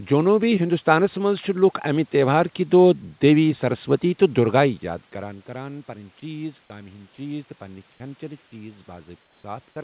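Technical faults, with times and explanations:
7.92 to 8.00 s and 9.22 to 9.44 s, comfort noise in place of the background: in pauses where the background sits about 38 and about 42 dB below the loudest speech, the real room noise is swapped for steady, featureless noise about 6 and about 3 dB quieter, for 80 ms and then 220 ms. This is likely discontinuous transmission, with the receiver synthesising noise while the sender is silent. Only the texture and level of the background change, and no speech is lost.
9.72 s, sound dropped by the voice detector: here the sound itself, not just the background, gives way to flat noise for about 40 ms, with roughly 30 ms of speech missing. The likely cause is the sender's voice detector mistaking the speech for background and stopping. The gap in the speech sets it apart from a plain background swap.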